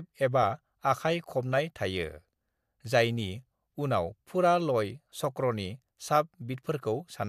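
Nothing technical goes wrong anywhere in this recording; the speech comes through steady and unbroken, with no dropouts, glitches or distortion to point to.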